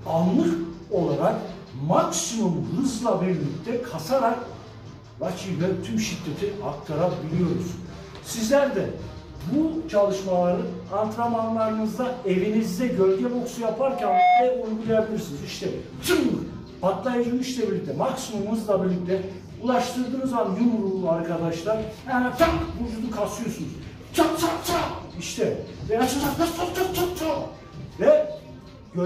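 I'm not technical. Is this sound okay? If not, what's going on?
No. There is a loudspeaker feedback squeal from about 13.8 to 14.6 seconds. A microphone picked up the loudspeaker it was feeding, so the sound went round and round that loop and kept getting louder at one pitch, here a piercing tone at 723 Hz. It swells up in under half a second until it is much louder than the rest of the sound, then stops.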